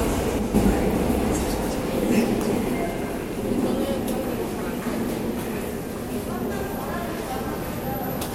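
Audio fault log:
0.39–0.54 s, one channel drops out: one side of the stereo feed was likely lost for 0.16 s, so after the mono sum the material common to both channels falls abruptly by about 6 dB and anything present only in the missing channel disappears until it returns.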